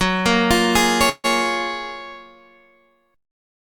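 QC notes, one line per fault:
1.09 to 1.26 s, call audio freeze: the sound stalls and the last moment is stretched into a short fading buzz, about 144 ms of fill in all, the last roughly 30 ms of it near silence, before resuming exactly where it left off. This is likely packets held up in transit draining the jitter buffer, so the receiver fills the wait rather than skipping ahead. Nothing is lost, but everything after it plays about 144 ms later.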